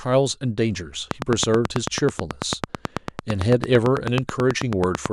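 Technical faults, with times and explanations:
1.11 to 5.07 s, train of clicks: a steady ticking runs over the speech at about 9.1 clicks per second, evenly spaced, around forty in all, each peaking roughly 20 dB above the speech and audible through the pauses too. The likely cause is a repeating pulse from interference or a faulty connection or power supply. Unlike random crackle or isolated dropout clicks, these pulses share one shape and keep a fixed rhythm that ignores the speech.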